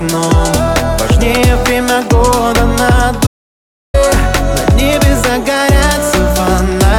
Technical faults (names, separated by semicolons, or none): audio dropout to silence